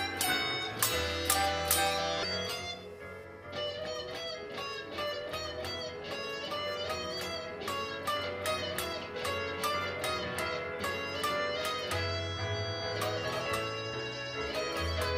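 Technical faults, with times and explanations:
0.00–3.25 s, pre-emphasis left on: for this opening stretch the treble stays lifted, about 8 dB higher at 10 kHz than at 1 kHz, a tilt that fits the CD 50/15 µs emphasis curve. The boost was applied before storage so that the playback side could cut it back and lower hiss, but the matching de-emphasis was never applied. The top end therefore stands too far forward, making the sound thin, bright and sharp in its sibilant detail until the tilt ends.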